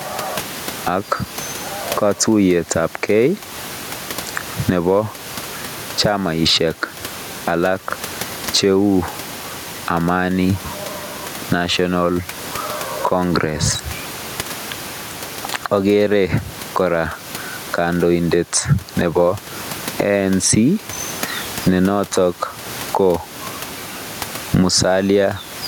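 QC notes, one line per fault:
Throughout: gain pumping. The room noise, about 28 dB below the speech, swells up in every pause and drops back as each loud syllable arrives, a swing of roughly 15 dB, and the speech sounds squashed and even in level. The likely cause is input gain set far too high with a fast limiter clamping it. On a waveform the peaks look flattened to one height; a spectrogram shows the noise floor brightening between phrases and darkening under speech.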